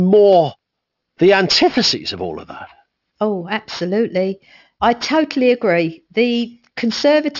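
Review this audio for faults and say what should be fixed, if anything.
Aliasing runs throughout the whole clip. The speech's sibilants and upper consonants sound gritty and metallic, and the spectrum is packed hard against a 6 kHz ceiling, which fits a drop from a 48 kHz rate to 12 kHz without an anti-aliasing filter. Energy above 6 kHz was not removed first, so it folds back below that edge as false, unrelated tones, sitting roughly 15 dB under the speech. To prevent it, low-pass the audio below half the target rate before downsampling, or use a proper resampler that does this automatically.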